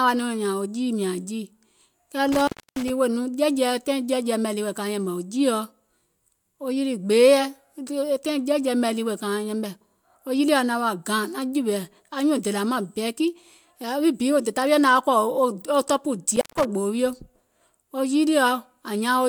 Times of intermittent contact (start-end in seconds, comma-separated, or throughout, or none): 2.32-2.90, 16.32-16.65